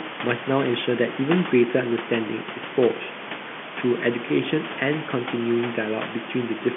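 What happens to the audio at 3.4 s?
Nothing goes wrong at 3.4 s: the speech continues intact through that moment, with only the room noise and the narrow telephone band of the G.711 line audible, both as they are throughout.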